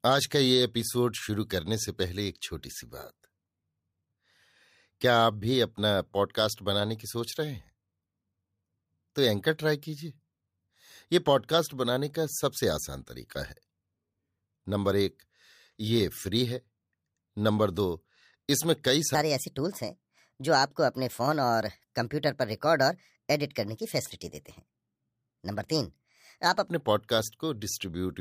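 Likely a clock mismatch from 19.15 to 26.68 s plays this section at the wrong speed, 1.28 times too fast, raising the speech's pitch about four semitones and hurrying it.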